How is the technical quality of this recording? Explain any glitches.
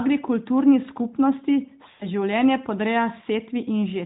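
The recording has one clear glitch, a short dropout in the middle of the speech. It comes through a narrowband mobile path with light AMR-NB coding, so nothing above 4 kHz is present.

From about 1.92 to 2.07 s there are lost AMR speech frames. Radio errors corrupted the frames, and they failed their checksum. About 80 ms of speech is missing, which fits four 20 ms frames. The decoder fills the gap by reusing the last good pitch and vocal tract settings while lowering the gain. The sound stretches out and fades, and then the voice returns briefly weak or rough.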